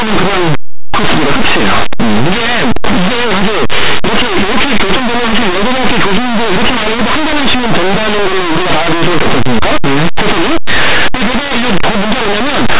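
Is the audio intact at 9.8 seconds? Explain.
No. At 9.8 s, as everywhere in the clip, the audio shows linear audio read as companded: plain 8-bit samples are expanded as mu-law codes, so values just on one side of zero jump to the largest outputs. The speech turns into very loud, harsh distortion.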